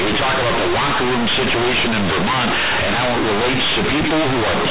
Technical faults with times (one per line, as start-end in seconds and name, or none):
0.00-4.71 companded audio read as linear